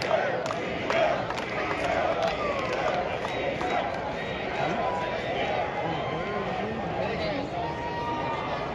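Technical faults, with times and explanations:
No technical faults can be heard anywhere in the clip. There is nothing here that needs a time or an explanation.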